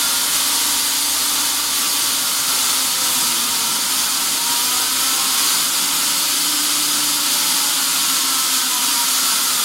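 The audio in this clip shows no technical faults. Nothing in the way it was captured, processed or delivered stands out as having gone wrong.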